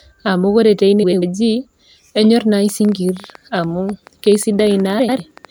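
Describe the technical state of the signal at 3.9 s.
At 3.9 s the speech sits inside a train of clicks running from 2.69 s to 5.46 s: around thirty near-identical pulses at about 10.9 per second, irregularly spaced and peaking near the speech level, likely from interference or a faulty connection or power supply, heard as uneven ticking.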